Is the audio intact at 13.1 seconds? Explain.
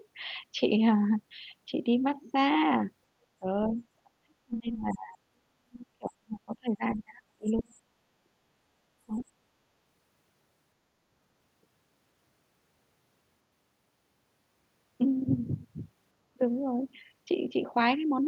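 Yes, at 13.1 seconds the speech plays through intact, with no dropout, click, distortion or other fault audible at that moment.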